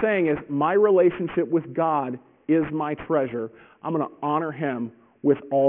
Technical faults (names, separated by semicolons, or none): aliasing